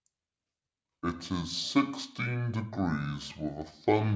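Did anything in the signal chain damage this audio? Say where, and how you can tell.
Yes. The speech runs slow and sounds low throughout, a wrong sample rate fault at the playback stage. Speed is cut to about two-thirds (0.667×) and pitch drops by about 7 semitones, the two moving in lockstep. That fits audio recorded at 24 kHz being clocked out at 16 kHz with no conversion. On a spectrogram, harmonics and formants are squeezed downward by a third and the top edge sits at 8 kHz instead of 12 kHz, while the waveform looks uniformly stretched in time.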